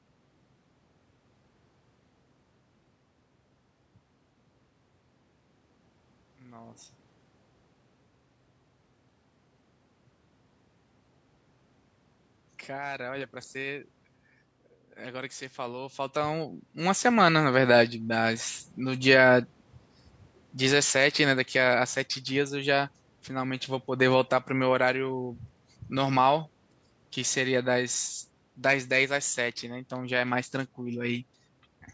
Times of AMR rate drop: none

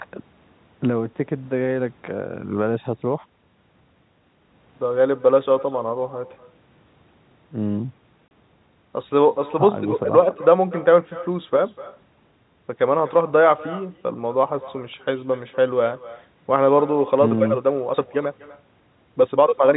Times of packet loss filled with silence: 8.28-8.31

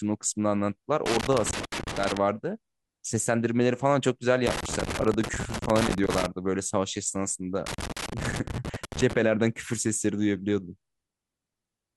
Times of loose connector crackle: 1.06-2.17, 4.47-6.26, 7.66-9.13

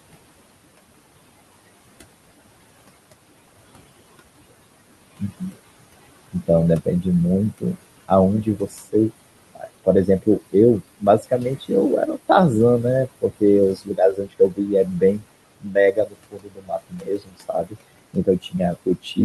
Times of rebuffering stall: none

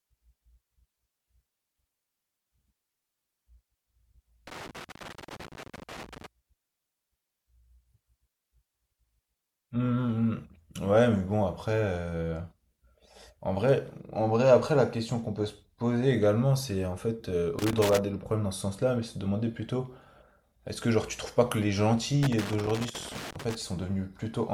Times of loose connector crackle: 4.47-6.26, 17.59-17.99, 22.23-23.55

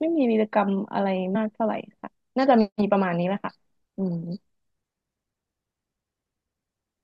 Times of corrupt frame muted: none

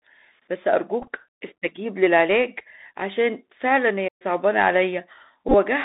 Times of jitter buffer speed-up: none

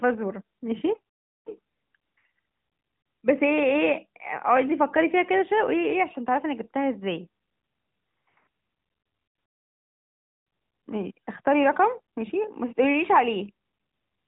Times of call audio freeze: none

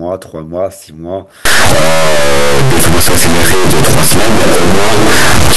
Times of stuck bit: 1.45-5.56

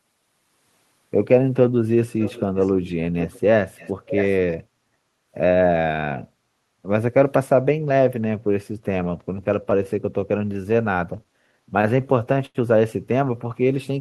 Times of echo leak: 2.19-2.94, 3.19-3.40, 3.77-4.37

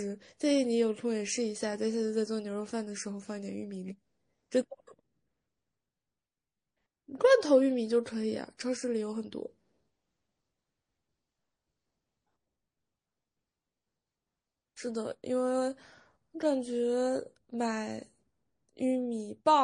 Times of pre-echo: 8.57-8.59

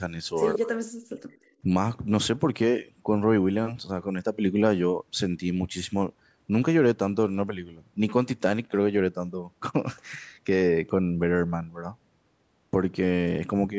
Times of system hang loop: none

